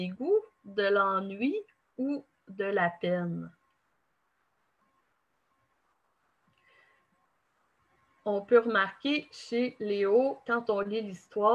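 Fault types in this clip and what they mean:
No audible faults: level, continuity and timing hold steady throughout, with nothing to flag.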